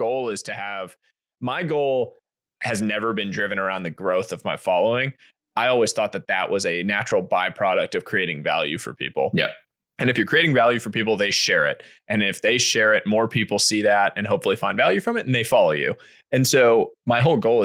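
From 0.63 to 4.38 s, automatic gain rising lifts level by about 8 dB as the control compensates quiet input; speech and background swell together, waveform envelope widening steadily.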